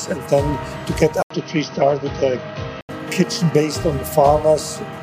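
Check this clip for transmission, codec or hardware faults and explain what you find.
One fault stands out, likely an input switched to a poorer device, between 1.22 and 2.89 s. At 1.22 s the sound drops out for about 80 ms, then returns band-limited, with nothing above 6.2 kHz, so it turns dull and boxy. A fresh background noise about 30 dB below the signal comes in with it, while the loudness stays much the same. At 2.89 s the full band returns. A codec's bandwidth drop would narrow the sound without the gap or the new noise floor.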